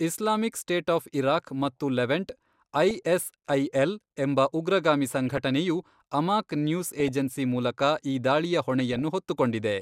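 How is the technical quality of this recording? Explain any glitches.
The speech carries four short bursts of DAB burbling. They occur at 2.90–3.03 s just after "ಆಫ್ ಇರಾಕ್ ಮತ್ತು ಲೆವೆಂಟ್", at 5.36–5.38 s after "ಎಂಬ ಉಗ್ರಗಾಮಿ", at 6.88–7.09 s just before "ಏಜೆನ್ಸಿ ಮೂಲಕ ಈ", and at 8.79–9.02 s.

Weak reception let a small fraction of a percent of bits slip past error correction into the MP2 data. Corrupted scale factors and samples throw individual sub-bands up or down for a frame at a time, producing short blips of noise laid over the voice. On a spectrogram these show as isolated rectangular blocks, each confined to a narrow band and one frame wide, flaring or vanishing out of step with the surrounding harmonics. The waveform shows brief irregular bumps rather than clean clicks.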